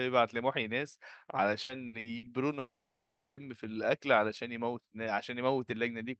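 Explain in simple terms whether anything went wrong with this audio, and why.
Two things went wrong, both early in this speech.

From 1.63 to 2.26 s there is repeated packet loss, which gives a robotic sound. Four small chunks of audio never arrived. The longest was 60 ms. Each time, the receiver patched the hole by stretching the last bit of sound. Together the patches cover about 240 ms, over a third of that stretch. So the speech turns choppy there, with pieces missing.

From 2.59 to 3.40 s the sound breaks off for about 780 ms. It is not just a short blip. First there is a brief fading buzz as the last sound is stretched out. Then there is silence for about 690 ms. After that, the speech carries on, but the missing part never comes back. This is likely a long network dropout, where the connection stopped delivering audio for most of a second.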